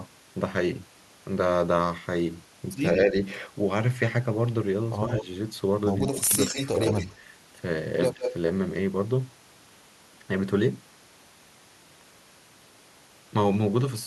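At 5.08, 6.07 and 8.14 s, the echo canceller likely failed to separate the near talker from loudspeaker echo during double talk, so speech suppressed in double talk dips the voice, briefly by about 5 dB and at 6.07 s by about 20 dB. Echo leak at 5.17, 6.40 to 7.13 and 8.22 s is likely residual loudspeaker echo the canceller missed, returning a delayed copy of the voice about 150 ms late, some 5 to 10 dB below it.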